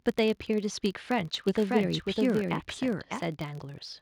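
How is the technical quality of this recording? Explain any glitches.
The speech recording has two clear technical faults: a constant buzz and a stretch where the audio is heard twice.

Throughout the clip there is a filter restarted on every block. The filter drops its memory at each block boundary and starts from silence, so every block opens with a small click. These clicks form a buzz at 43.1 Hz, which fits a 1024-sample block. Unlike mains hum, the buzz rises and falls with the speech level.

From 1.48 s to 3.22 s there is a doubled audio track. A second full-band copy of the speech runs about 0.7 s behind at roughly the same loudness, likely from a second capture path or an edit that holds two copies out of step. Unlike an echo or reverb, the copy has no decay or room colour, and it starts and stops abruptly.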